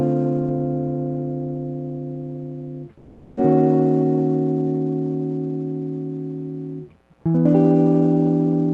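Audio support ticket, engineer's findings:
Music drops out 2.97–3.39 s, about 0.4 s; likely a long network dropout upstream of the Opus jitter buffer. Concealment stretches the last sound into a fading buzz and never goes silent, then the music resumes with that section missing. This is a gap and a skip forward, not a brief click or a single lost packet.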